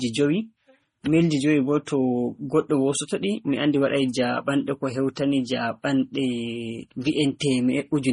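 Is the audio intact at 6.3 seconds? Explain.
No. At 6.3 s, as across the whole clip, the speech shows what is likely transcoding between lossy codecs: a low-rate Vorbis-style encode, around 35 kbit/s, re-encoded as MP3 near 32 kbit/s. Each codec adds its own swirly, watery smearing on top of the other's. A spectrogram shows a hard ceiling with nothing above 10.5 kHz and patchy, blocky energy below it. The waveform looks normal.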